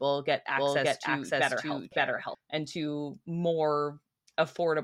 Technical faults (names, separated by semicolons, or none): doubled audio track